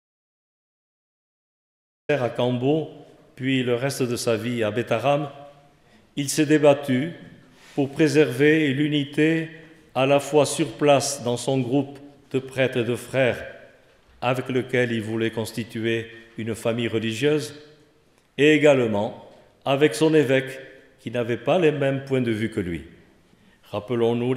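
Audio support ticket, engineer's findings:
Audio dropout to silence, 0.00 to 2.09 s, already in progress at clip start. Dead silence, no room tone or hiss, then sound enters abruptly mid-flow rather than fading or gating up. Likely input loss upstream (device disconnect, link failure or mute) while the recorder kept writing silence. A noise gate would leave residual floor or a ramped release, and a late record start would begin cleanly. Content in the gap is unrecoverable.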